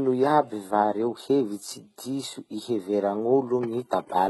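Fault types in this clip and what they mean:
HE-AAC compression: the speech has heavy codec damage. Its treble is synthetic and gritty, and s sounds come out metallic and lispy, likely from spectral band replication copying lower bands upward at a bitrate near 16 kbps. A spectrogram shows blocky, repeated high-band patches and nothing above 11.8 kHz.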